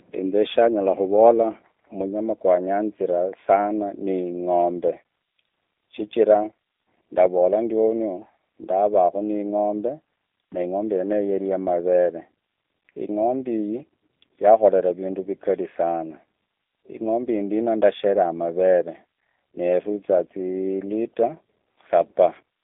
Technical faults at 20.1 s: G.729 codec

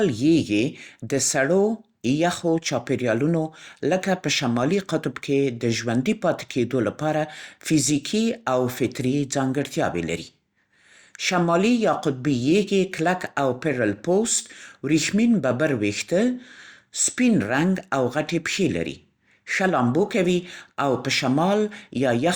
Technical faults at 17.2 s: none

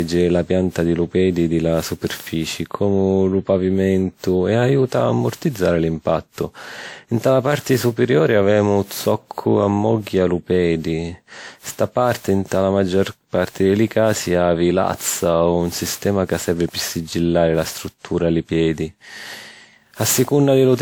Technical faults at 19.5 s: generation loss

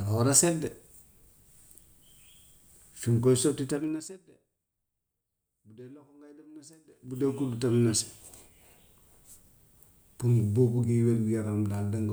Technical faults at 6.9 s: zipper noise

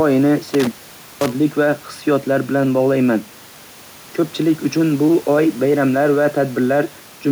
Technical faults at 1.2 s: intermittent contact

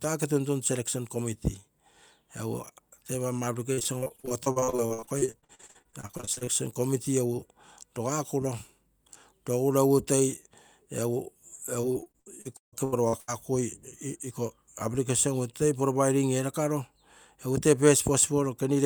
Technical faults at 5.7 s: repeated packet loss (robotic sound)

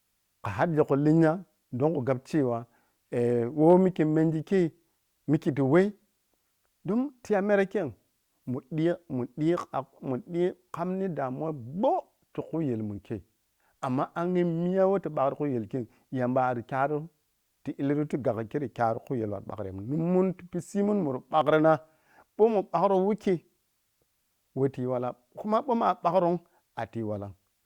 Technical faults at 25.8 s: none

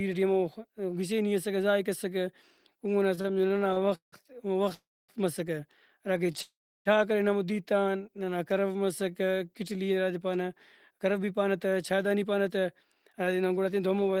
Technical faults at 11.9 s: jitter buffer speed-up

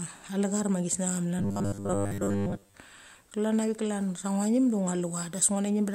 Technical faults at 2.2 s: robotic sound from repeated short buffers

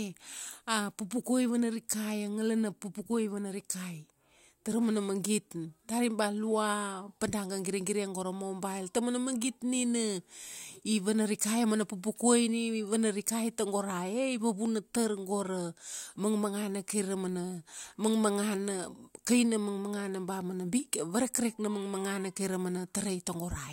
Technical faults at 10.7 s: none

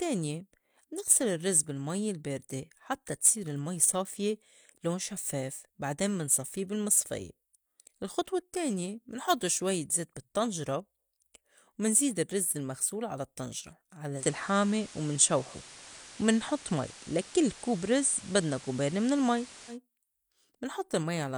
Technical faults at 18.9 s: digital radio blending to analogue

